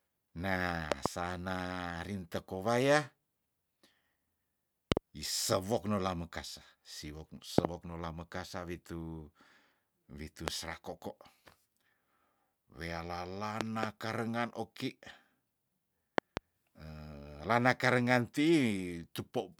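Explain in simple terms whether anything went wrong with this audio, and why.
Something did go wrong: the speech is interrupted by a loud pop six times. Each one is a sharp thump, far louder than the voice, and the talking carries on underneath. Most come as a quick double pop: 0.92 to 1.08 s, 4.92 to 4.99 s (just before "isewok nola mokasa"), 7.58 to 7.67 s, 13.61 to 13.85 s (just before "karengan oki"), and 16.18 to 16.39 s. A single pop falls at 10.48 to 10.50 s. The likely cause is a sudden electrical jolt, from a plug, switch, static or a driver glitch.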